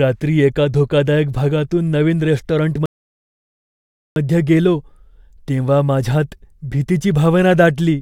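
The player exhausted its downloaded buffer and halted while waiting for more data, a rebuffering stall in this speech recording. At 2.86 s the audio drops to silence, then resumes at 4.16 s exactly where it left off, losing nothing but inserting about 1.3 s of dead air.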